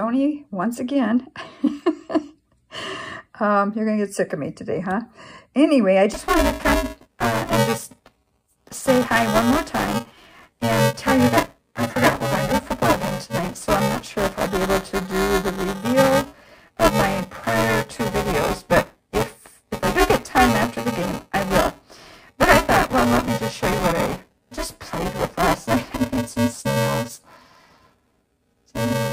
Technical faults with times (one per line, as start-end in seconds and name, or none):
6.14-29.12 buffer tearing